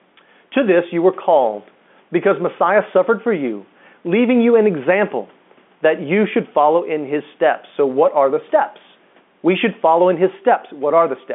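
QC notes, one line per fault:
throughout, gain pumping: the level shifts by roughly 5 dB whenever the speech gets loud, over room noise sitting about 43 dB under the speech. That pumping makes loud and soft passages sit closer together and gives everything a squashed feel. The likely cause is the mic gain being set too high with a fast limiter or compressor clamping down on each loud moment. All of this comes through a telephone-band path with nothing above 3.8 kHz.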